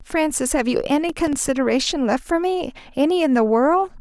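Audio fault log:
1.09–1.49 s processor overload crackle. The processor fell behind and missed a run of buffer deadlines. Each miss left a hard-edged gap of silence. The gaps are a few milliseconds each, fitting small buffers, and around fifteen of them merge into a gritty crackle on the speech.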